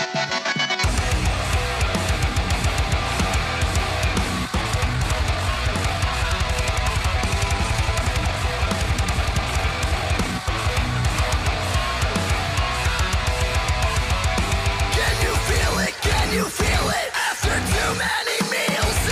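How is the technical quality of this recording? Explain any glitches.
The recording has one clear glitch: a time-stretched section from 4.45 to 10.73 s. Across that stretch the pace jumps to about 1.5 times normal speed while the pitch stays where it was, then drops back at the end. It sounds rushed. The likely cause is software squeezing that portion to fit a shorter length, preserving pitch by discarding short slices of the waveform and splicing the remainder together.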